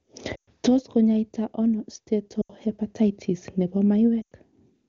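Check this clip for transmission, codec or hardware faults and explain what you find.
Lost AMR speech frames occur three times, at 0.36–0.49 s, 2.41–2.52 s and 4.21–4.32 s, under a clean high-rate AMR-WB codec. Corrupted frames are concealed by repeating earlier parameters with falling gain, so speech drops to near silence within two frames, then returns rough.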